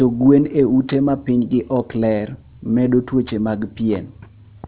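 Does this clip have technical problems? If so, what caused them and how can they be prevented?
Yes. Aliasing runs through the whole speech clip: sibilants sound gritty and metallic because content above 4 kHz folded back down, which fits a drop to an 8 kHz rate without an anti-alias filter. On a spectrogram, energy runs hard up to 4 kHz, with faint mirrored traces roughly 30 dB below the speech. To prevent it, low-pass filter below half the target rate before downsampling.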